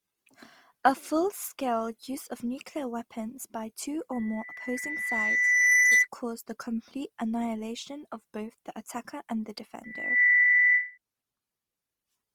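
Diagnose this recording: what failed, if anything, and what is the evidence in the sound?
Throughout the speech there is a rough, grainy texture, with noisy fill rather than gaps in the spectrum, while the band stays full to about 20.3 kHz. The codec stage is the likely cause: Opus compression in its CELT music mode, at a rate that fits about 24 kbps.

Loudspeaker feedback squeal, from the acoustic loop between loudspeaker and microphone, appears twice. At 4.12 to 6.08 s, between "nuclear weapons by two" and "cause the complete annihilation", a 2 kHz tone swells over about a second and a half to roughly 15 dB above the speech. At 9.84 to 10.98 s, after "the attacker and the", the same tone builds in under half a second to about 10 dB above it.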